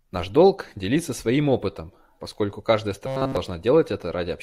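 Speech clip with robotic sound from repeated short buffers from 3.07 to 3.37 s: a rigid 133 Hz buzz, likely from one roughly 7.5 ms chunk looping throughout.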